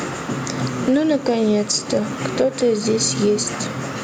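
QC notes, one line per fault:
Throughout, gain pumping: room noise swells in gaps and ducks about 10 dB under loud syllables, likely excessive mic gain hitting a fast limiter.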